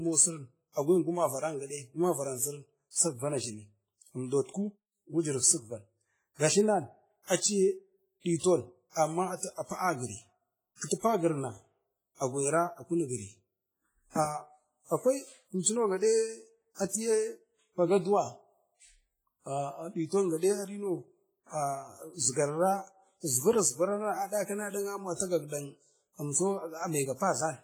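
Across the whole speech clip the sound rings and washes, with a hiss that swells and fades with the signal. The likely cause is heavy WMA compression, where coarse quantisation in long transform blocks smears noise over tens of milliseconds, fitting a low bitrate near 24 kbps. Pre-echo appears at 10.86, 15.59, 16.88, 20.37 and 25.15 s. Each attack is preceded by a brief hiss lasting 43 to 56 ms, because quantisation noise sized for the loud onset spreads back into the quiet part of its block, softening the attack.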